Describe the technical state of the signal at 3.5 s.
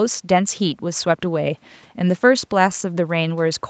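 At 3.5 s the speech is intact, with no dropout, click or distortion, only the ordinary band-limited sound of a call path that carries nothing above about 8 kHz.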